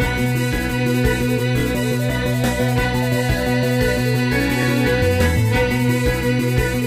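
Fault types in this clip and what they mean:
Overlapping chunks: At 1.60 to 1.63 s and again at 4.63 to 4.65 s, a stretch of about 23 ms is played twice, giving a brief stutter or click at each spot. The audio was handled in 3.0 s blocks, and each new block began slightly before the previous one finished, so the shared 23 ms sliver repeats at every join.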